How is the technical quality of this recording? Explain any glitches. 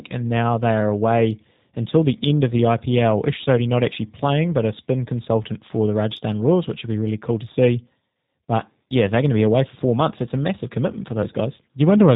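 The recording is clearly limited by low-bitrate telephony coding across its whole length. G.729 codec damage runs throughout: the speech is rebuilt from a vocal tract model, pitch prediction and a few pulses per 10 ms frame, which fits roughly 8 kbit/s. Everything above 4 kHz is missing, so the sound is muffled, slightly rough and synthetic.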